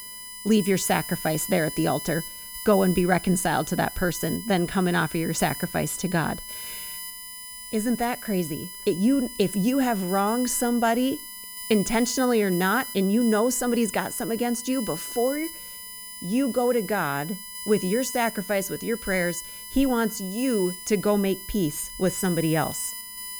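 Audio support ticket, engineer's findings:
USB whine, whole clip. Fixed-pitch tone on a 1 kHz series under the speech, strongest at the 10 kHz harmonic, roughly 15 dB below the signal. USB 1 ms frame current leaking via shared power/ground into the audio interface.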